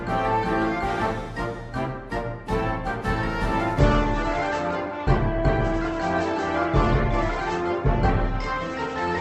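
At 3.79 s the audio drops suddenly in quality and stays that way to the end. This is an adaptive stream at a lower bitrate. Nothing remains above 8.2 kHz, and codec artefacts thicken. There is no gap. The switch fits a change from about 64 to 16 kbit/s.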